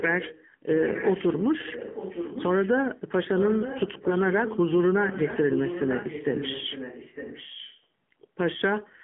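From the start, the whole clip carries AMR narrowband mobile codec damage. Nothing above 3.6 kHz survives. The speech sounds buzzy and synthetic, with a clearly coded edge. That thinness fits a low AMR-NB mode of about 7.4 kbps.

Echo leak appears at 0.19 to 0.45 s, 0.65 to 1.22 s, 1.59 to 2.7 s, 3.32 to 4.59 s and 4.82 to 7.85 s. A fainter copy of the speech trails by 905 ms. It sits roughly 10 to 15 dB down. Likely cause: an echo canceller on a loudspeaker phone let pickup through.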